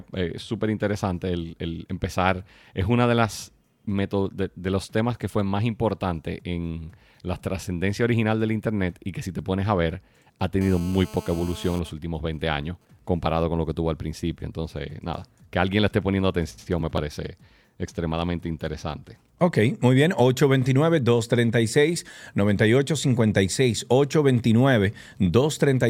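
Right after "pones a ver ha", from 10.61 to 11.79 s, there's a GSM phone buzz: a harsh, raspy 217 Hz drone full of harmonics, about 20 dB under the speech. A nearby phone in a call is pulsing its transmitter, and the audio circuitry rectifies those bursts.

From 11.79 to 12.99 s, just before "comparado con lo que", it switches to GSM signalling bursts, even ticks with a longer 217 Hz buzz twice a second, a bit quieter at roughly 25 dB down. The phone is still on the call, but its user has gone quiet, so it only sends sparse groups of bursts.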